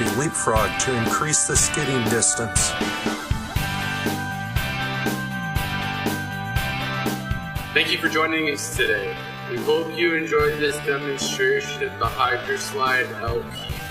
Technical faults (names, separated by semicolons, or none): time-stretched section